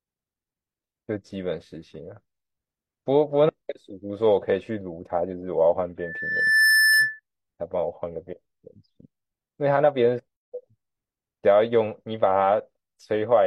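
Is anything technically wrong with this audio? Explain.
Yes, there are two faults in this speech. From 6.00 to 7.20 s a steady 1.8 kHz tone swells over roughly 0.7 s to about 5 dB above the voice. This is loudspeaker feedback squeal: the microphone picks up its own loudspeaker, and the loop gain at that frequency exceeds one. From 10.36 to 10.52 s the speech drops into a 159 ms silence with smeared edges, then carries on where it stopped. This is a gap at a join of encoded pieces, where encoder start delay and end padding were left in.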